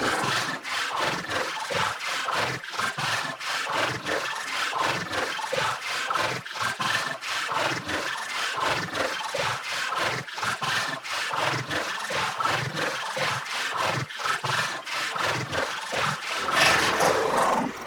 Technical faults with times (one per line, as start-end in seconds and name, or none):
0.00-17.86 channel delay (doubling)